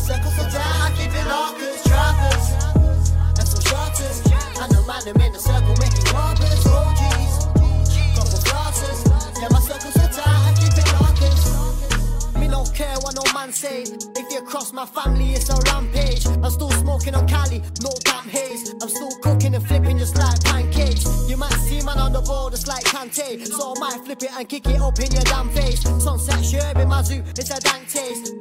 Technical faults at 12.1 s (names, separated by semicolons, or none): none